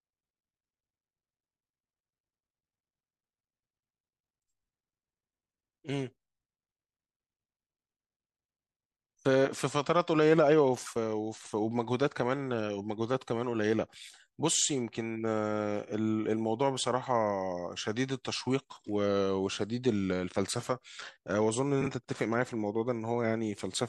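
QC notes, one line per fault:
11.37–11.53 s and 21.81–21.87 s, frames out of order: two adjacent blocks of about 72 ms (three 24 ms frames each), then about 24 ms (single frames), decode with their order swapped, giving a brief garbled flutter and no lost time.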